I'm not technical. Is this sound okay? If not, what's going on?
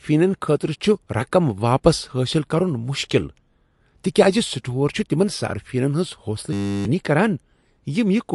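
No. Two things went wrong.

The first is likely MP3 compression: the recording was squeezed into a small file, and the encoder threw away detail to save space. The damage is plainly audible. The speech has a watery, swirly quality, consonants like s can sound metallic or chirpy, and everything above about 11 kHz is missing, so the top end sounds dull and closed in.

The second is a system hang loop from 6.53 to 6.85 s. The computer stalled while the sound hardware kept replaying the same tiny slice of audio, just 10 milliseconds long, over and over, 32 times. Repeating that fast turns into a steady buzz at 100 times per second. The real speech during that stretch, about a third of a second, is lost.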